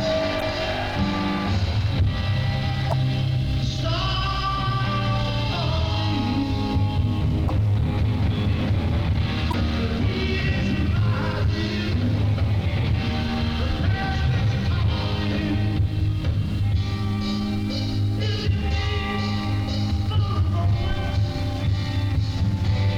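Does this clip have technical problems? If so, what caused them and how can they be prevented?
Yes, four short blips from damaged data in a compressed stream, at 0.38–0.43, 2.89–2.93, 7.46–7.50 and 9.50–9.54 s. Bad bytes make the decoder misread frames and hunt for the next header. Checksummed transfers and verified storage prevent this.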